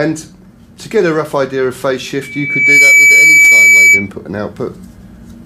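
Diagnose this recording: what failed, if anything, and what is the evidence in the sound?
A piercing tone near 2.3 kHz swells in from 2.22 s over about half a second and holds roughly 10 dB above the sound until 4.09 s. This is loudspeaker feedback squeal: the microphone hears its own loudspeaker, and loop gain exceeds one at that frequency.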